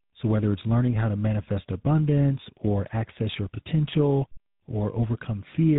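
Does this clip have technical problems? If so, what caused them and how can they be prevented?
Yes. Throughout, tandem speech coding re-encoded the degraded speech from CVSD through G.711 A-law into GSM full rate, leaving it rough, warbly and muffled above 3.8 kHz. To prevent it, keep the call in a single codec end to end, or use transcoder-free operation between links.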